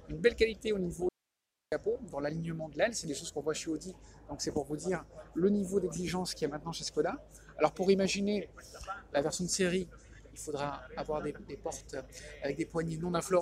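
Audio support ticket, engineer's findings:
Audio dropout to a faint residue, 1.09–1.72 s (about 0.63 s). Signal cuts abruptly to hiss roughly 55 dB below programme. Path downstream stayed live; likely upstream signal loss or interrupted feed. Waveform: sharp-edged flat gap. Spectrogram: hard vertical edges, faint broadband noise floor between.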